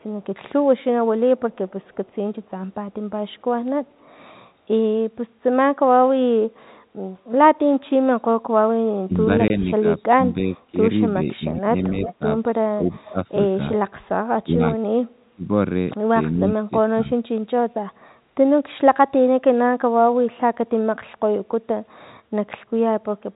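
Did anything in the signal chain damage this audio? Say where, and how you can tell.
Yes. The damage is in call processing and the network, while the G.711 telephone coding itself passes the speech with at most faint damage.

Echo leak shows as a delayed copy of the speech at 0.00–0.26 s and 1.38–2.15 s, trailing by 332 ms, then at 12.03–12.14 s and 13.05–13.10 s, trailing by 361 ms. The early copies are very faint, the 12 s one much stronger. The likely cause is an echo canceller not removing the far end's loudspeaker pickup. A fixed, discrete lag rules out room reverberation.

Speech suppressed in double talk appears at 9.06–13.19 s, 14.40–15.49 s and 16.36–17.18 s. The level dips by roughly 20–25 dB at worst, over about one and a half seconds in the first span and half a second in each later one. The likely cause is an echo canceller ducking the talker while both sides speak at once.

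Packet loss filled with silence cuts a 20 ms gap at 9.48–9.50 s, inside the first suppressed stretch. It stands apart from the surrounding ducking by its sharp edges and its exact length, which fits one lost 20 ms packet replaced by silence at the receiver.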